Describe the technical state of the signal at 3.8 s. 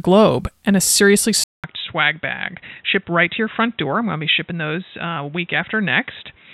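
At 3.8 s the signal is band-limited to about 3.9 kHz, dull and boxy, somewhat quieter, with a new noise floor; from 1.44 s onward, after "and a seriously" and a 200 ms gap, likely an input switched to a poorer device.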